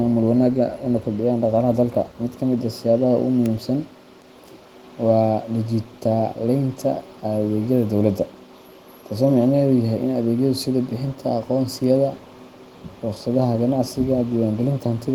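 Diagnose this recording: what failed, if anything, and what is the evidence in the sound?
Nothing stood out on listening; no stage of the chain shows a failure that can be heard in this speech.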